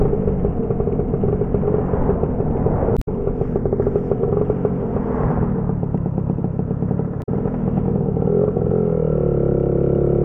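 Damaged data in a compressed stream breaks the audio twice, from 2.94 to 3.08 s and from 7.19 to 7.29 s. Corrupted bytes make the decoder misread frames and lose sync while it searches for the next header, so each stretch sounds as a brief chirp, squawk, click or gap.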